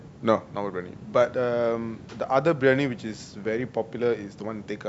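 No technical faults can be heard anywhere in the recording.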